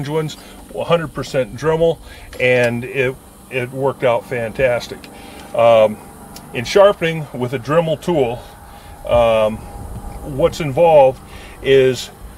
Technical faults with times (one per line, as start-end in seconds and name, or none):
none